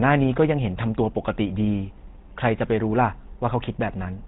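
Speech passed through the GSM full-rate codec for its whole length, at a rate that fits 13 kbps. The codec rebuilds the voice from a vocal-tract model driven by a sparse pulse train, so it sounds plainly buzzy and gravelly, with nothing above about 3.9 kHz.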